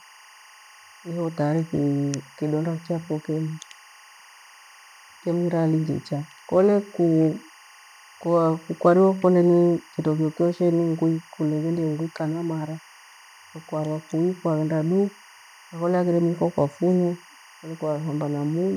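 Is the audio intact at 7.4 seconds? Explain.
No. At 7.4 s, as throughout the clip, a steady chirping warble sits well below the speech. This is timecode bleed: linear timecode running at 24 frames per second leaks into the audio, its square wave flipping between tones near 1 and 2 kHz.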